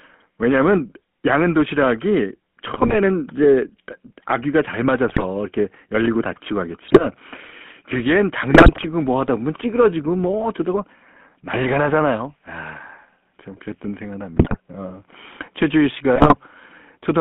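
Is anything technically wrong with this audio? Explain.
Yes. Throughout, the speech has the buzzy, gravelly roughness of the GSM full-rate codec. Its pulse-excited vocal-tract model fits a 13 kbps link, and the spectrogram shows nothing outside 200 Hz to 3.4 kHz.

GSM bit errors occur at 2.74–2.95, 5.08–5.23, 6.84–7.07, 8.50–8.87, 14.34–14.60 and 16.16–16.37 s. Corrupted filter, pitch and gain values produce squawks, pops and gargling. These appear as smeared spectral bursts and sudden level spikes in the waveform.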